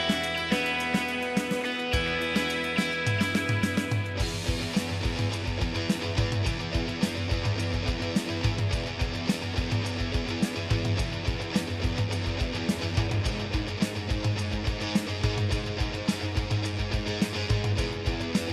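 No technical faults are audible anywhere in the recording.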